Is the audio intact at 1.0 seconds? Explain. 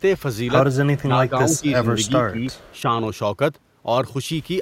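No. Speech suppressed in double talk runs from 0.97 to 1.85 s. The echo canceller likely could not separate this side's talker from the loudspeaker echo and turned both down, so the voice dips, by up to around 15 dB, for about 0.7 s of that span.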